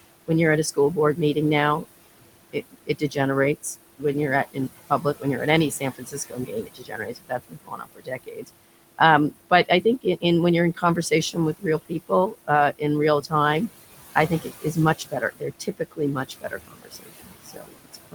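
Noise suppressor artifacts run through the whole clip. The suppressor pulls down bands it judges to be steady noise by about 19 dB. The room noise, about 14 dB below the speech, sinks in pauses and swells under the voice.

Speech cut by the noise suppressor follows the same mechanism. It mistakes quiet speech for noise and turns it down. This happens at 0.74–1.37 s, after "when you're at a"; 2.53–3.17 s; 4.52–8.5 s, about two seconds in total; 9.31–10.24 s, before "when you're in"; 10.75–12.82 s; and 14.15 s to the end. Drops reach about 17 to 22 dB. The speech turned down with the background sounds swallowed or faint.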